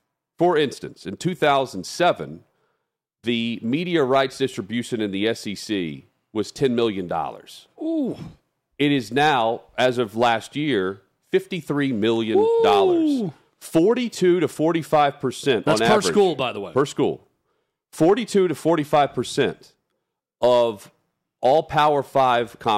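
The speech crackles and roughens briefly on its loudest syllables throughout, a sign of hard clipping: the level runs about 5 dB past what a stage can pass, so only a small fraction of peaks are sliced flat, adding bright, harsh upper harmonics.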